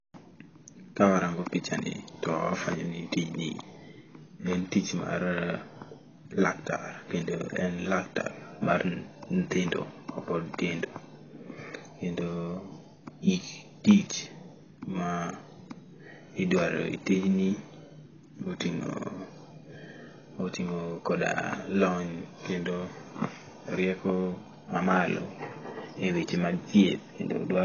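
From start to finish the speech sounds dull and smeared, with nothing above 6.8 kHz, so sibilants lose their edge and turn fizzy while sustained sounds warble. The likely cause is heavy AAC compression of the AAC-LC kind, with damage that fits a bitrate around 16 kbps. At that rate the encoder lowers its cut-off, leaves gaps in the spectrum and quantises each frame coarsely, which produces the hollow, swirling texture.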